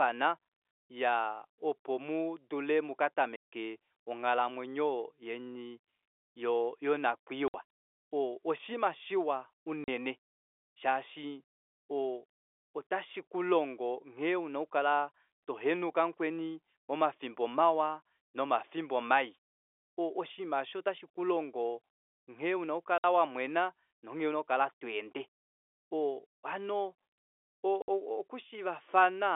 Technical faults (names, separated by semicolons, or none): packet loss filled with silence